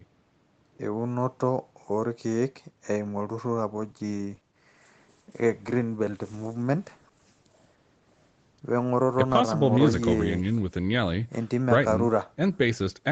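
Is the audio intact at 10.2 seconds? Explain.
No. At 10.2 s the speech is still inside a call bitrate drop that runs from 3.72 s to 10.75 s. The bandwidth estimate fell and the Opus encoder was pushed from 32 kbps down to 16 kbps, holding the lowest rate for about 4.96 s. With half the bits, the coding is coarser, so the speech sounds rougher and watery. The stretch ends about half a second later, when the bitrate climbs back.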